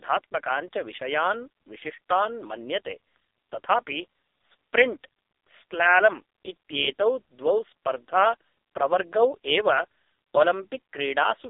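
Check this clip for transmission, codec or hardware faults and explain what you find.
One fault runs through the whole clip: the speech has passed through the AMR narrowband mobile codec, and the damage is heavy.

Throughout, the speech sits in a telephone band of roughly 300 Hz to 3.7 kHz, with nothing above 3.8 kHz. AMR-NB samples at 8 kHz and rebuilds each 20 ms frame from a vocal-tract model excited by sparse pulses. The strong buzzy, synthetic timbre fits one of its lowest modes, around 5 kbps. A plain band-limiting filter would sound muffled but still natural. This sounds artificially resynthesized.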